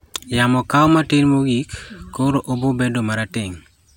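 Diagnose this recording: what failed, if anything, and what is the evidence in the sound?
Nothing in the speech signal points to a failure anywhere in the chain, from capture and conversion through transmission, storage and playback.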